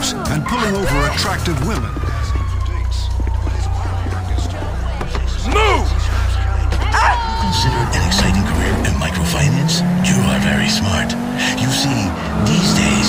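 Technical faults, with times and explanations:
Nothing stood out as a technical problem on listening.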